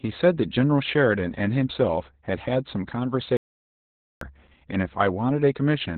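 From the start, the speech carries Opus voice compression with heavy codec damage. Nothing is present above about 4.3 kHz, so the codec has fallen back to narrowband SILK linear-prediction coding, which fits a very low bitrate of around 8 kbps. With so few bits, the excitation signal is quantised coarsely. The voice sounds muffled and hoarse, with a slightly robotic, buzzy edge. Consonant detail is dulled because the upper band is simply absent.

At 3.37 s the sound cuts off abruptly, an audio dropout to silence lasting until 4.21 s, about 0.84 s in total. The gap is silent rather than quiet room tone, with no background left. That points to the input being lost, likely a device or link failure, while the recording carried on writing silence. Whatever was spoken in that stretch is gone, and the speech resumes mid-flow at 4.21 s.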